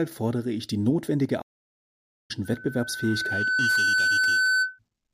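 A speech clip in which the sound cuts out abruptly at 1.41 s and stays silent until 2.31 s, a gap of about 0.88 s, before the talking resumes. That dead pause in mid-flow is a playback stall: the player most likely ran short of data or had its processing thread held up, so nothing reached the output until it caught up and carried on. Shortly afterwards, from 2.44 s to 4.79 s, a steady tone at 1.5 kHz rises out of the speech and swells over roughly a second and a half into a piercing whistle that ends up around 5 dB louder than the voice. This is loudspeaker feedback squeal: a microphone was picking up the loudspeaker it was driving, and at 1.5 kHz the round trip through the loop gained more than it lost, so that single frequency kept amplifying itself.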